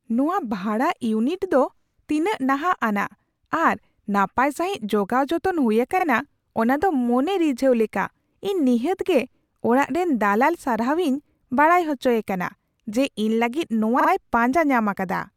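Repeated frames: a short run of compressed speech frames was sent again, so the decoder replays the same 42.7 ms block once at 5.99 s and twice at 13.99 s. Each is heard as a quick stutter that lengthens the audio by 42.7 ms and 85.3 ms, which fits two-frame runs.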